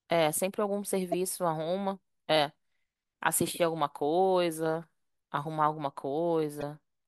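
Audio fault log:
1.12–1.14 s and 6.57–6.63 s, corrupt frame decoded: two short glitches cut into the speech, the first loud, up near about -15 dBFS, the second quieter, around -25 dBFS. Flipped bits made the decoder push energy into the wrong frequencies, and the lengths fit roughly one, then two, damaged frames.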